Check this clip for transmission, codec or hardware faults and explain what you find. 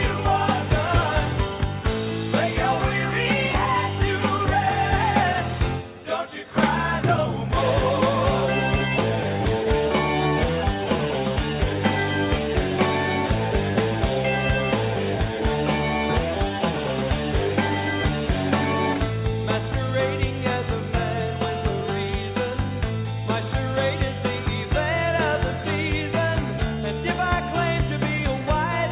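No transmission, codec or hardware faults can be heard anywhere in this clip. There is nothing to report.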